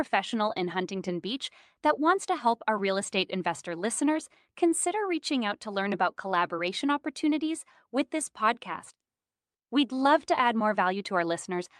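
Clock drift between sender and receiver runs through the whole clip. The sending end's clock runs about 4 percent fast, so audio arrives quicker than the receiver plays it out and its jitter buffer keeps filling. The result is small timing hiccups recurring all through the speech.

Repeated timing corrections run from 0.17 s to 11.59 s, matching playback to a source running at 104 percent speed. The receiver keeps discarding short slices of audio to drain the surplus. The cuts fall at uneven intervals and each is small.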